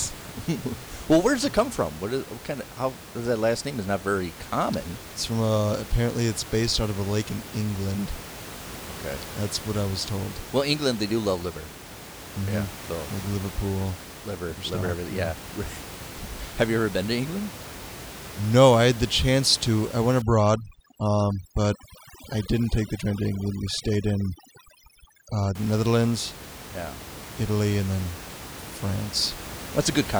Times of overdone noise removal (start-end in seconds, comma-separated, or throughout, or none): 20.22-25.55